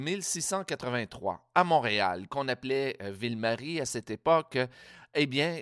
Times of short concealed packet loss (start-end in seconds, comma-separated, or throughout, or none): none